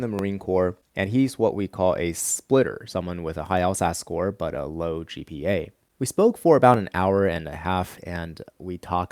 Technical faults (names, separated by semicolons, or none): clock drift buffer slips